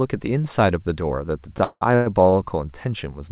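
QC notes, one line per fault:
1.58–2.34 s, repeated stalls (stutter): the sound catches four times in this span as the jitter buffer runs dry and the receiver stretches the last sound to fill each wait. About 320 ms is filled this way, roughly 42% of the span, with the longest hold at 176 ms. That hold fades out. Nothing is lost, so the audio drags and hiccups. On a spectrogram, smeared horizontal streaks show a frozen spectrum repeating, all below the G.711 A-law path's 4 kHz ceiling. The waveform shows looped, periodic segments.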